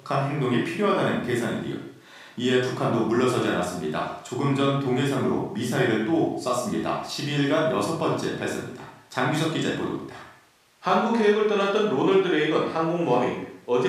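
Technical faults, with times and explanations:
Nothing stood out on listening to this speech recording.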